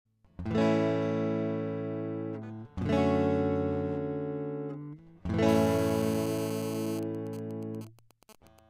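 From 5.49 to 7.0 s, GSM phone buzz: a 2G phone mid-call, rectified by the audio circuit, gives a steady raspy 217 Hz buzz about 13 dB down, harsher than mains hum. From 7.03 to 8.59 s, GSM signalling bursts follow as the phone's user goes silent: even ticks with a longer 217 Hz buzz twice a second, roughly 20 dB down, broken rather than continuous.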